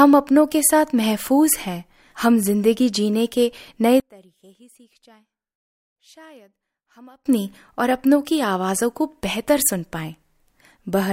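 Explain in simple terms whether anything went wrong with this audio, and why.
Between 4.0 and 7.26 seconds the speech suddenly drops to a faint trace of itself, then returns at full strength. The likely cause is one channel inverted: one side of the stereo signal has its polarity flipped, so when both sides are combined into a single channel, the centred voice in each cancels the other almost completely. What remains is only the small difference between the two sides, heard as a weak copy.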